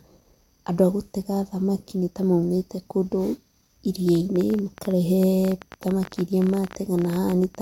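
Likely electrical interference or a faulty connection injects a train of clicks from 4.09 to 7.56 s: around fifty uneven pops, 13.3 per second, peaking a few dB above the speech.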